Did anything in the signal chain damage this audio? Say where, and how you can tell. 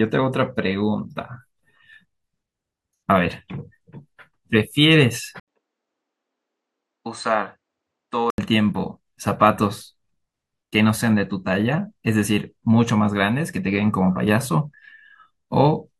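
Yes. From 5.40 to 8.38 s the speech turns duller and quieter, consistent with an input switched to a poorer device, most likely a change of capture device at the driver level. On a spectrogram the band above 8.9 kHz goes empty for that stretch, and a faint new noise floor appears well below the speech. The waveform shows an 80 ms gap at the switch and a level drop of about 5 dB until the original input returns.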